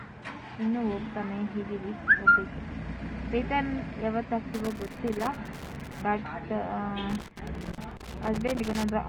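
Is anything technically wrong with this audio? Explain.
Yes. Irregular bursts of scratchy crackle break up the sound from 4.54 to 6.02 s and again from 7.10 to 8.90 s. This is loose connector crackle: a worn or dirty contact keeps making and breaking as it shifts, chopping the signal into fragments.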